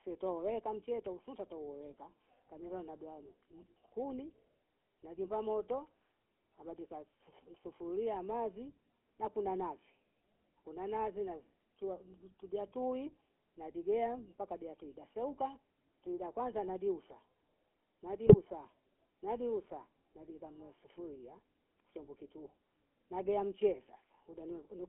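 From start to finish the speech sounds buzzy and gravelly, confined to a narrow band of about 250 Hz to 3.4 kHz. This is the GSM full-rate codec, which fits a 13 kbps stream. It rebuilds the voice from a vocal-tract model driven by coarse pulses, leaving a plainly audible rough texture.

From 18.27 to 18.36 s the voice breaks into a short squawking, gargled burst. These are GSM bit errors. Corrupted filter, pitch and gain values reached the decoder, which fits a handful of damaged frames. That warped the spectrum and jolted the level.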